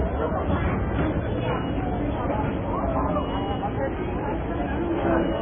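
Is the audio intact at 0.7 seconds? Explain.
No, at 0.7 s the sound carries heavy MP3 compression damage, running throughout: nothing above 3.5 kHz and watery swirling from weak lines flickering, which fits a very low bitrate near 16 kbps. The flicker is what a plain low-pass filter wouldn't produce, so a codec is the likely cause.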